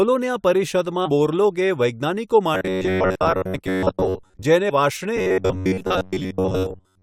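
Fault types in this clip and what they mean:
Robotic sound from repeated short buffers: From 2.55 to 4.45 s and from 5.17 s to the end, the speech turns into a rigid, metallic buzz near 94 Hz. A chunk of about 11 ms is likely replayed while most real audio is skipped.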